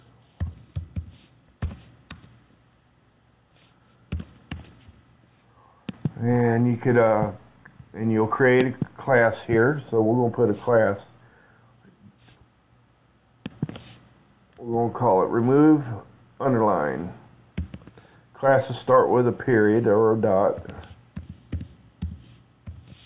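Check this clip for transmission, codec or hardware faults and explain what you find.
No transmission, codec or hardware faults.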